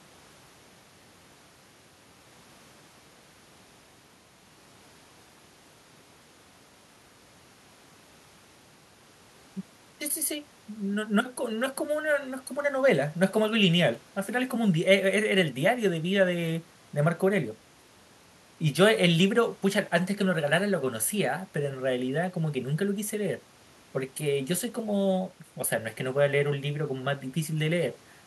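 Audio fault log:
No faults detected anywhere in this speech recording.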